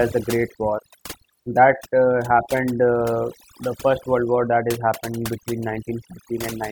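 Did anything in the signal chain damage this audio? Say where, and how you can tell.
Yes. A noise reduction stage in the processing was set far too aggressively, producing overdone noise removal throughout. It cuts individual frequency bands whenever they sit near its noise estimate, so the background drops and breaks up into twinkling specks, while softer speech detail vanishes.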